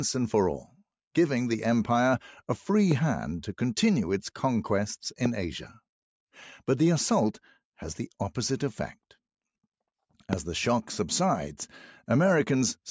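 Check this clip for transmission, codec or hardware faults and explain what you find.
Two faults show up: a dip from the noise suppressor near the start and a single loud pop near the end.

From 0.64 to 0.82 s, the sound is cut by the noise suppressor. For about a fifth of a second the level sinks, by about 12 dB at its deepest. The suppressor judged this stretch to be noise and turned it down harder than the surrounding audio. Steady or fading parts lose the most. The result is a brief hollow drop, and any tail there is clipped short.

At 10.33 to 10.35 s there is one loud pop. It lasts about 20 ms and peaks about 15 dB above the surrounding sound. It is heard as a sharp crack laid on top, while the audio carries on underneath. The likely cause is a sudden voltage pulse entering the signal path, such as from a plug, a switch, static or a driver glitch. The circuits after it shape that pulse into a short, hard click.

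The call microphone processing leaves nothing above 8 kHz. That top limit and the trimmed lowest bass are normal for a call path.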